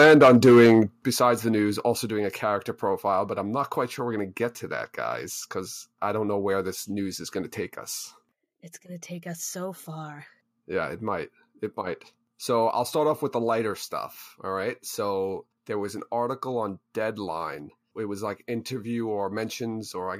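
Microphone overload runs from 0.0 to 0.8 s. The opening speech has flattened, harsh peaks with a crackling edge on the loudest syllables. The likely cause is an input level set too high, driving the signal roughly 7 dB past the converter's limit. Each peak that exceeds full scale has its top sheared off, and around a tenth of the samples in that stretch were clipped at the converter's limit.

Microphone volume stepped down at 0.04 s, 1.05 s, 2.07 s and 12.69 s. At each point the speech and the background fall abruptly in level together, by about 2 dB, 8 dB, 3 dB and 1 dB. This likely comes from the call software reacting to the overloaded input by cutting the device's input gain in discrete steps. The 8 dB drop at 1.05 s is the largest.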